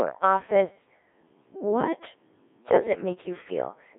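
Throughout this speech recording, the signal has passed through a Codec 2 vocoder, and the heavy damage fits its 1.3 kbit/s mode. Rather than carrying the waveform, the link sends only pitch, voicing, energy and a coarse spectral envelope, and the decoder rebuilds the voice from summed sine waves. The result is buzzy and robotic from start to finish, confined to a narrow band of about 250 Hz to 3.6 kHz.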